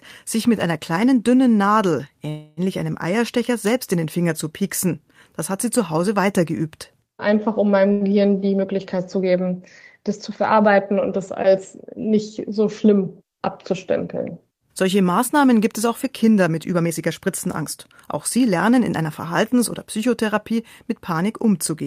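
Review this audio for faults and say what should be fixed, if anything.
Call audio freeze at 2.29 to 2.60 s: the speech halts for about 0.28 s as a fading held buzz, most likely packets delayed in transit emptying the jitter buffer, then resumes where it stopped.

Short stall from a late packet at 7.92 to 8.04 s: one packet arrives late, so the last sound is stretched by about 0.09 s before speech continues unbroken.

Jitter buffer speed-up at 12.85 to 13.93 s (right after "das als nicht so"), 16.70 to 17.64 s and 18.13 to 21.13 s: to shed built-up delay, the receiver trims pitch-period slices, so speech runs 6%, 16% and 4% faster at unchanged pitch. The passages lose roughly 0.07, 0.15 and 0.15 s, and the middle one sounds noticeably hurried.

To prevent these, stabilise the network path to reduce delay spikes and bunched packet arrivals, and let the jitter buffer drain more gradually after a delay.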